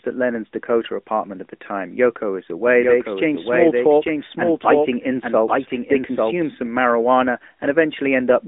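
From the start the whole clip has been through the AMR narrowband mobile codec. The line runs from about 250 Hz to 3.6 kHz, with nothing above 3.7 kHz, and the buzzy, synthetic edge on the speech sounds like a mid rate, around 10 kbps.

From 2.67 s to 6.51 s there's a doubled audio track, a second full-band copy trailing about a second behind and roughly 5 dB down. It's dry, with no room tail, and cuts off abruptly just before "some marijuana". It's likely a second capture path running late.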